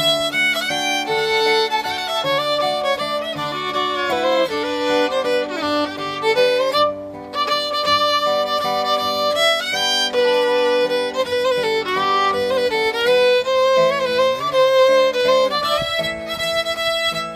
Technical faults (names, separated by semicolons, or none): none